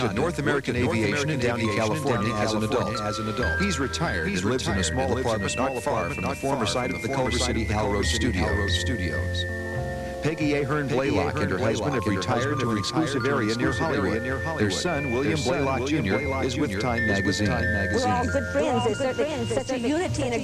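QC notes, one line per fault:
throughout, doubled audio track: a full-band copy trails about 0.7 s behind, roughly 5 dB down, with no decay unlike an echo; likely a second capture path.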